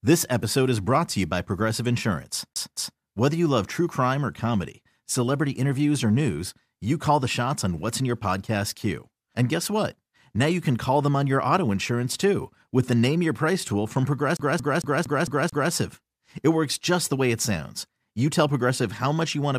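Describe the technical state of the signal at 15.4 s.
At 15.4 s the speech is caught in a CD stuck on one turn, running from 14.37 to 15.72 s just after "tool from". A scratch keeps throwing the laser back, so a 225 ms slice repeats six times with a brief mute at each jump. A spectrogram shows identical blocks separated by thin silent gaps.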